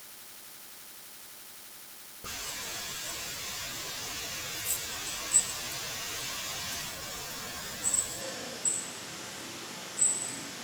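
At 8.21 s the speech suddenly turns roomy and hollow, losing bass through to the end: a switch to a distant microphone, likely replacing a failed close one. Level holds, but room noise rises to about 25 dB below speech. A spectrogram shows thinned lows and gaps filled in.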